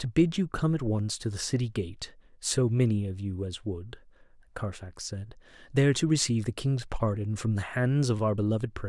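No technical faults are audible.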